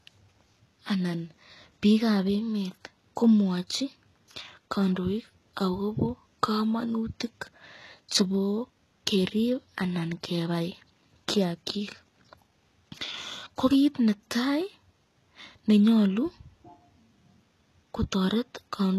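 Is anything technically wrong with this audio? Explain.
Yes. For the whole clip, this speech has nothing above about 12.3 kHz, plus the smeared, watery texture you get from a heavily squeezed codec. That points to low-bitrate audio saved at a high bitrate: most likely a very low-rate encode, something like HE-AAC around 16 kbit/s, re-saved as a 192 kbit/s MP3. The bigger file can't bring back what the first codec threw away, so the dull top end and artefacts stay baked in.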